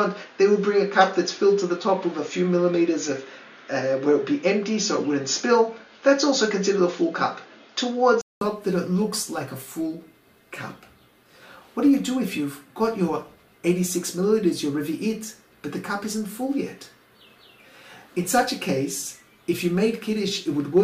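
For the first 8.41 s the sound is dull and boxy, with nothing above 6.9 kHz, a noise floor of its own sitting roughly 35 dB below the signal, and a level about 5 dB different. At 8.41 s a 200 ms silence falls, and the full, clearer band returns. This is likely an input switched to a poorer device. A simple filter or EQ change would not bring the gap or the change in noise and level along with it.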